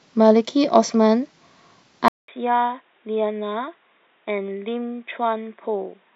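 At 2.08 s the recording likely switched its input to a poorer device, such as a different microphone or a headset's call profile. A gap of 200 ms of silence marks the switch. From there to the end the speech is band-limited, with nothing above 3.8 kHz, so it sounds dull and boxy. It also drops by roughly 10 dB and picks up a new background noise about 40 dB below the voice.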